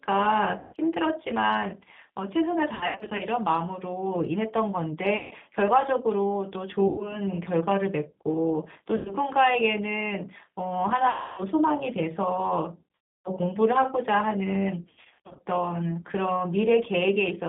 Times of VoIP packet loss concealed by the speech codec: 0.59-0.73, 2.75-3.22, 5.17-5.34, 6.88-7.20, 8.97-9.15, 11.10-11.42, 12.95-13.29, 14.83-15.41

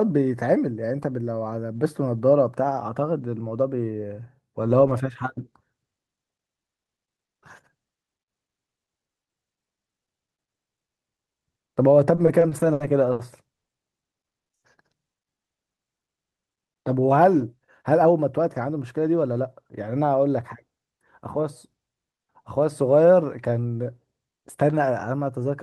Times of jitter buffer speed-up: 16.54-18.77, 24.18-24.92

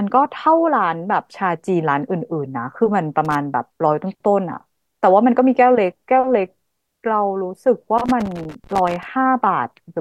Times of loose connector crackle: 3.25-3.35, 7.98-9.07

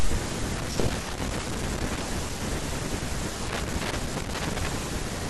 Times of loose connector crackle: 0.57-2.02, 3.48-4.67

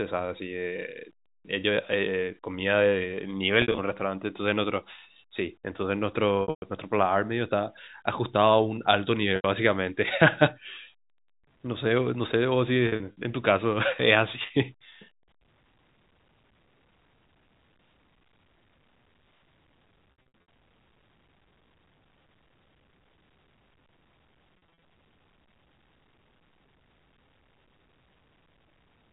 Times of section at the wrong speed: none

